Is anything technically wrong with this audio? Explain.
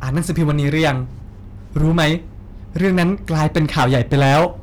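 Yes. Throughout the speech there is a harsh, gritty fuzz riding on every loud syllable, with a crackly edge on the strongest peaks. This is hard clipping. The signal reaches a stage roughly 14 dB hotter than it can pass, so around a tenth of the samples hit the ceiling and have their tops sliced flat. Those squared-off peaks generate harmonics high up the spectrum, which is where the buzzy distortion comes from.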